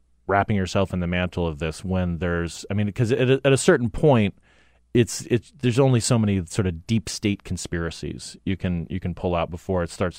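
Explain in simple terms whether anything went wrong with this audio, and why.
Nothing went wrong here: the speech comes across steady and whole, with no dropouts, jumps or odd noises anywhere along the way.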